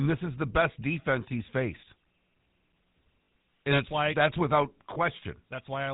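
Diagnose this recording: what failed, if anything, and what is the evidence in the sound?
The GSM full-rate codec at the codec stage colours the whole clip. At 13 kbps it rebuilds the speech from a vocal-tract model driven by a sparse, regularly spaced pulse excitation. Nothing above 4 kHz survives, so the speech sounds dull and band-limited. The coarse excitation gives it a plainly audible buzzy, gravelly roughness. The speech is coded this way from start to finish rather than damaged at any single moment.

Lost GSM frames occur at 3.24–3.28 s and again at 4.94–4.98 s, a network-stage fault. The first gap is about 40 ms and the second about 20 ms, which fits two lost frames and then one. In each gap the decoder reuses the last good frame's parameters. This holds the sound as a brief rough, metallic ring instead of a dropout. Both gaps are well short of a third of a second, so neither fades to silence.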